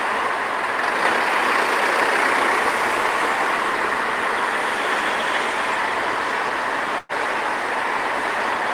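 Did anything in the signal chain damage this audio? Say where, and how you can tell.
Yes. A call audio freeze at 6.98 to 7.12 s stretches the last sound into a fading fill for about 111 ms, then resumes where it stopped with nothing lost but everything later by 111 ms. Network packets likely stalled, emptying the jitter buffer.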